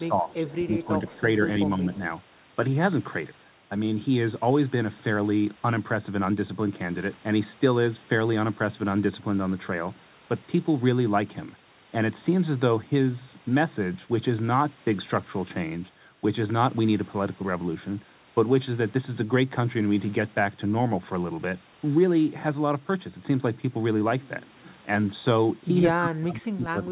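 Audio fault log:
0.08–0.95 s, 1.12–1.43 s, 1.78–1.88 s and 25.92–26.91 s: speech suppressed in double talk. The speech level sags and partly drops out, by about 15 dB in the first stretch, about 10 dB in the second, about 5 dB in the third and about 25 dB at the very end. The likely cause is both ends talking at once, so the echo canceller could not tell local speech from loudspeaker return and attenuated everything while the far side spoke.
0.65–0.77 s: echo leak. A faint delayed copy of the speech, lagging by 140 ms and about 25 dB below the direct speech, comes through as a brief scrap inside the first suppressed stretch. The likely cause is a loudspeaker at the far end whose canceller left part of the microphone pickup unremoved, so that residue travelled back. Its narrowband tone, with nothing above 4 kHz, fits the 64 kbps G.711 path it crossed.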